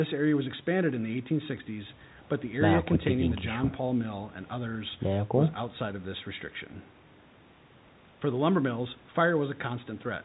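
Nothing in this speech recording registers as a technical fault.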